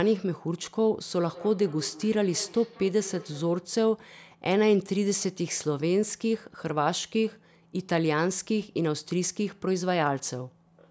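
From 1.18 to 3.67 s the speech comes back as thin, ringing repeats about a fifth of a second apart, peaking about 18 dB below the voice. This is feedback echo between two devices: one device's playback re-enters another's microphone, beyond reach of its own echo canceller.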